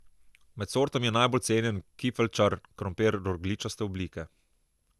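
Throughout, the speech sounds swirly, hollow and smeared, attacks blurred, nothing above 12.6 kHz: likely generation loss from roughly four MP2 passes, fitting 128 kbit/s.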